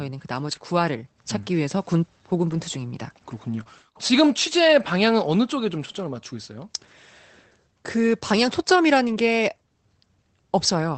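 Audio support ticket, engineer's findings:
Lost packet rebuilt from error correction, 0.47–0.65 s, 1.29 s, 2.49–2.59 s, 3.51–3.61 s, 9.07–9.13 s. Short patches of rougher, noisier speech, no gaps. Opus in-band FEC: the next packet carried a low-bitrate copy of the missing audio, and the decoder played it in place. Rebuilt spans of 100, 20, 60, 60 and 40 ms, consistent with runs of lost 20 ms packets.

Short concealed packet loss, 3.63–3.67 s, right after the 3.51–3.61 s rebuilt patch. Brief smear or wobble, about 20 ms. That audio arrived too late and had no FEC copy, so the decoder extended the preceding sound and blended back into the received stream. Opus call path throughout: band limited to 8 kHz, coding noise fits roughly 24 kbps.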